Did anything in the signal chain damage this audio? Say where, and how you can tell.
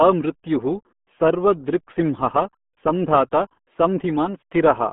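Yes, at the codec stage: the RealAudio 14.4 codec muffles and garbles the speech throughout, with nothing above 3.7 kHz. That gargle, beyond mere band-limiting, points to an 8 kbit/s coder.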